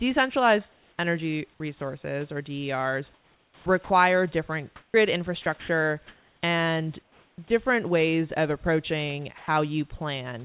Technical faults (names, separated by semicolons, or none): comfort noise in place of the background; sound chopped by the voice detector; sound dropped by the voice detector